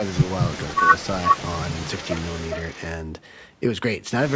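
A faint copy of the speech trails by about 0.4 s at 0.07–0.77, 0.96–1.07 and 1.29–2.87 s, likely echo leak from a far-end speakerphone.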